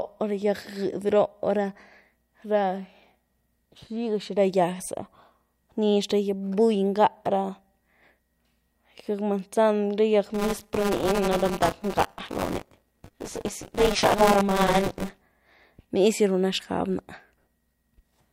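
From 10.34 to 15.22 s, buffer tearing adds a robotic 200 Hz buzz. Writer and reader have slipped, so about a fifth of each period replays audio roughly 20 ms old.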